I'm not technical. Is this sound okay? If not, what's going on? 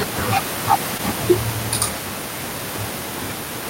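No. At about 0.97 to 1.01 s, short concealed packet loss: a tiny piece of the call arrived too late, so the receiver patched the gap, leaving a brief smear or wobble in the speech.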